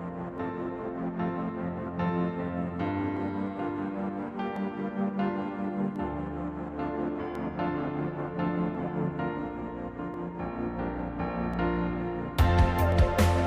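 A regular click or pop runs through the audio from about 0.38 s to 12.92 s, repeating every 1.4 s, roughly ten times. These are clock drift buffer slips, likely from two devices on separate clocks drifting apart by something like 500 ppm, with a few dozen samples dropped or repeated at each slip.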